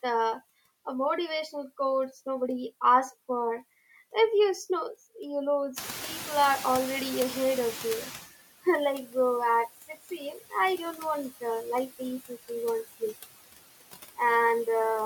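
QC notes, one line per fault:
Throughout, noise suppressor artifacts: the suppressor is pulling the steady background down by about 16 dB, working band by band and frame by frame. Between words the noise sinks away, then comes back up underneath the speech whenever someone's talking, because those frames carry enough energy that the suppressor eases off. What you hear is a background that pumps in and out with the speech instead of sitting at a steady level.
5.76 to 8.26 s, noise suppressor catching up: the room noise itself is genuine. It jumps by about 18 dB around 6 s and settles about 12 dB under the speech. The suppressor's noise estimate was tuned to the quieter level, so right after the jump the louder noise gets through with little reduction. Over about 2.5 s the estimate catches up and the noise sinks back, ending up about 13 dB lower. You hear a swell of background that slowly fades.
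9.88 to 10.54 s, speech cut by the noise suppressor: here the suppressor treats part of the speech as noise and turns it down with the background, by about 18 dB at the deepest point. Roughly 300 ms in total gets hit. Those bits come out swallowed or faint, as if the talker dropped off for a moment, because the suppressor mistook the quieter parts of the speech for noise.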